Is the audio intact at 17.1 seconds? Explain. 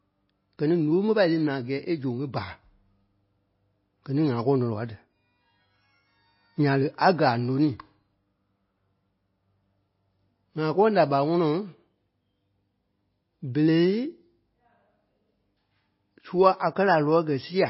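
No, MP3 compression runs throughout, likely starved of bits, so the encoder drops everything above 5.6 kHz and switches weak frequency lines on and off, making the speech dull and watery.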